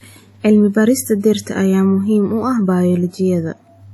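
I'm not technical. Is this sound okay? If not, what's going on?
No, not quite. From start to finish the speech has a ringing, washy quality, with a hiss that swells and fades along with the voice, and nothing at all above about 18.3 kHz. That's most likely WMA compression squeezing the file down too far.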